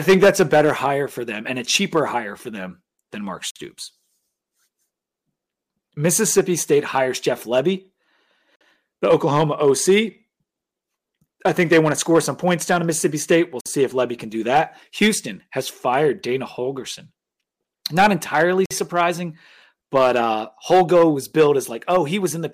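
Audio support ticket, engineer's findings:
Gap between chunks: 50 ms hard-edged silences at 3.51, 8.56, 13.61 and 18.66 s, repeating every 5.05 s. Speech resumes exactly where it stopped, so nothing is lost, unlike dropouts. Points to 5 s chunking with padding or late-starting playback at each join.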